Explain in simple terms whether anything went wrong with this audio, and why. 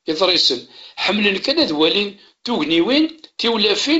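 Nothing stood out on listening to this speech clip, which sounds like a wideband phone call with nothing above about 7.7 kHz.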